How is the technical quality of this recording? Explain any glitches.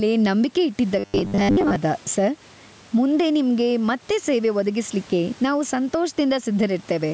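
The recording has two audible faults: gain pumping throughout and a robotic burst near the start.

Gain pumping runs the whole clip, likely from excessive gain with a fast limiter: the background swells in gaps and ducks by roughly 10 dB, a rippling envelope on the waveform.

Robotic sound from repeated short buffers appears from 0.99 to 1.76 s. Most of that stretch is repeated fragments, fitting a 10 ms buffer, producing a rigid 100 Hz buzz, seen as evenly spaced harmonic stripes.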